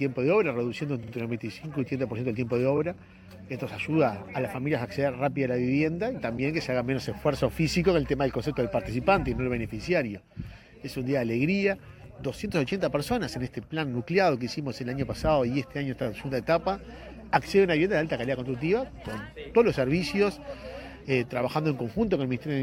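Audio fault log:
1.02–1.12 s and 2.77–2.79 s, repeated frames: A 46 ms block plays twice more, adding 93 ms. Later, a 23 ms block plays once more. That fits runs of compressed frames of about 23 ms each sent again. Each repeat stutters.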